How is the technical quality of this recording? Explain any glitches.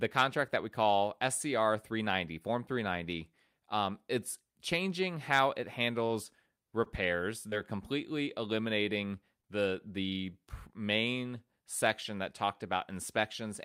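The speech comes through with four brief network glitches, two stalls and two concealed losses, all between about 6 and 9.5 seconds.

Short stall from a late packet: at 6.06 to 6.12 s, right after "it's changing how it", and again at 6.84 to 6.88 s. A packet turned up late, the jitter buffer ran dry, and the receiver stretched the last bit of sound until it arrived, roughly 35 ms and then 19 ms of fill. Nothing's missing, but the playout delay grows by those amounts and you hear a sound held too long, with a buzz or dip.

Short concealed packet loss: at 7.50 to 7.54 s, just before "completely eliminating the the", and at 9.42 to 9.45 s, between "completely eliminating" and "the the main section". Each time about 20 ms of audio never reached the decoder, so it papered over the gap by extending the previous sound, pitched if voiced and shaped noise if not, then blended back in. It comes across as a quick smear or wobble.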